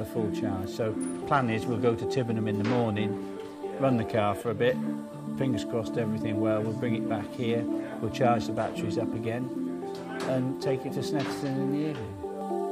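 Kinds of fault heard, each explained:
No faults detected in this audio.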